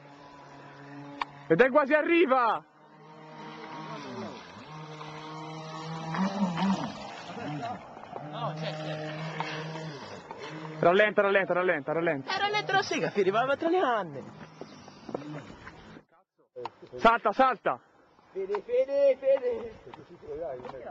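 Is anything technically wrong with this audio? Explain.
No, nothing stood out as a technical problem on listening.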